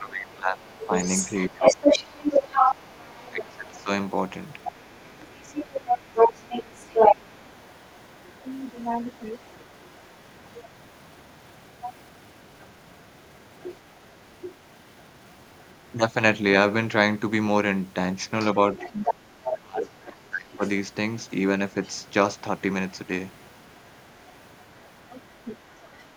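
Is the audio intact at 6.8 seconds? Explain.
No. Two faults overlap at 6.8 seconds.

The first is the other side's voice leaking through. From 0.61 to 15.75 s a second voice runs under the main talker. It is about as loud as the talker, so it competes directly rather than sitting quietly behind. This is likely loudspeaker playback reaching the microphone, with the echo canceller failing to strip it out.

The second is speech suppressed in double talk, between 6.31 and 7.5 s. Here the far side was playing on the loudspeaker while this side talked. The talker's level dips sharply, at worst by about 20 dB. These dips add up to roughly a third of a second within that window. The likely cause is the echo canceller confusing its own talker with the echo and turning both down together.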